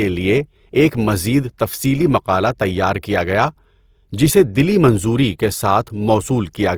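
Opus compression runs through the whole of this speech clip, its texture pointing to an encoder in the music (CELT) mode at a low rate, which fits about 24 kbps. The damage is plainly audible: the encoder holds each band's energy but, short of bits, fills band detail by folding lower bands or injecting noise, so the speech sounds rough and grainy rather than swirly. Bandwidth stays fullband, with content up to about 20.3 kHz. This is likely the codec.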